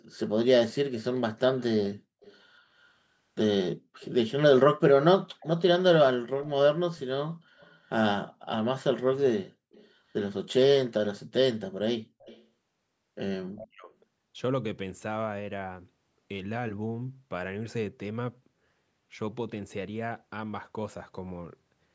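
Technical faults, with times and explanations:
1.58–2.36 s, 4.0–4.09 s, 5.4–5.61 s, 7.59–7.74 s, 9.72–9.88 s and 12.2–12.45 s, echo leak: the far end's loudspeaker sound likely reached its microphone, and its echo canceller failed to remove it all, so a residue came back down the line. Each time a faint trailing copy of the speech follows the original by 230 ms, sitting about 25 to 35 dB below it.
13.48–13.93 s, speech suppressed in double talk: with both ends talking at once, the echo canceller likely mistook the local talker for loudspeaker echo and attenuated everything it picked up. The speech sinks sharply for roughly half a second, falling by around 40 dB at its deepest point, so it sounds ducked before recovering once the overlap ends.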